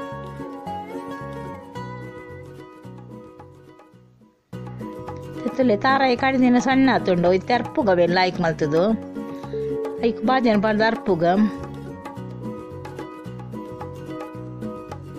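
Nothing is technically wrong with the audio.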